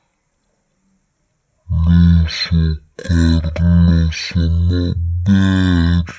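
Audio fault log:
throughout wrong sample rate: speech runs at 0.363 times normal speed and 17.6 semitones low, which fits 44.1 kHz audio played back at 16 kHz without conversion.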